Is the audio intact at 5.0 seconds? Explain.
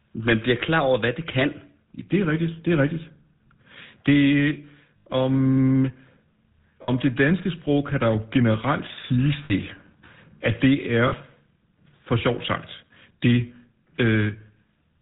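No. From 4.98 to 5.07 s, lost GSM frames were concealed by repeating the last good frame's settings, leaving a rough metallic ring. The gap is about 80 ms, which fits four dropped frames. Throughout, the GSM full-rate codec rebuilds the sound from a vocal-tract model with sparse pulse excitation, giving plainly audible buzzy roughness and nothing above 4 kHz.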